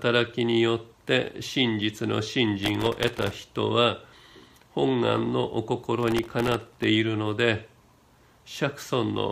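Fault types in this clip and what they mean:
Processor overload crackle: the processor couldn't finish its tiny buffers, under a millisecond each, in time, so a run of them got stuck replaying old audio with hard edges. It comes through as gritty crackle from 2.63 to 3.34 s and again from 6.01 to 6.84 s.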